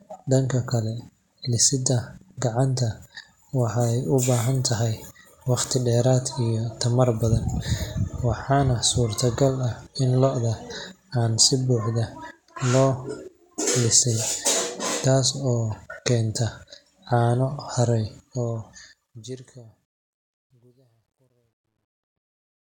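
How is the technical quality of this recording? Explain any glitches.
The recording's clear technical flaw sits in the closing fade-out. From 18.15 s to 22.67 s, just after "caano haray", there is truncation distortion on the fade. The level stage keeps only about 12 bits with no dither, so as the signal sinks toward the smallest step, the waveform collapses into coarse square stairs. From 19.86 s to 22.67 s the speech turns gritty. A waveform would show visible stair-stepping. A spectrogram would show broadband grainy energy smeared above the fading harmonics.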